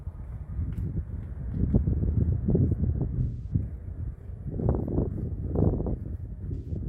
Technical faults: AAC frame loss with concealment

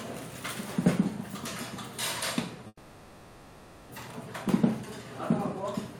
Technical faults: call audio freeze

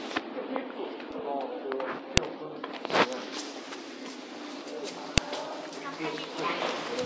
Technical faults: file header played as audio

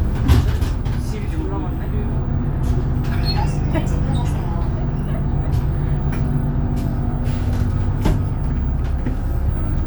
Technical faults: none

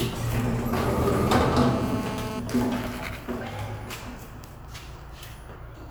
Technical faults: GSM phone buzz

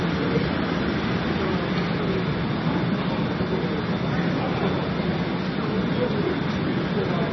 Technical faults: MP3 compression

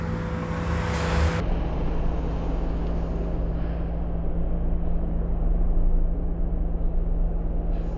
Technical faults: wrong sample rate

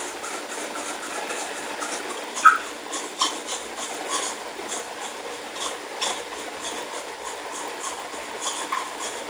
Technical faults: block size mismatch (padded)

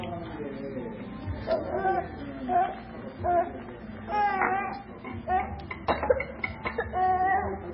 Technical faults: MP3 compression

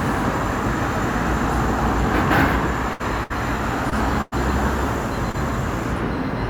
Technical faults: burst of packet loss; short concealed packet loss

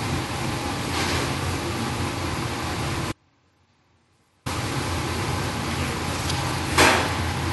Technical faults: audio dropout to a faint residue

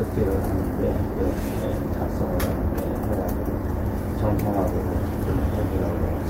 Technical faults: none

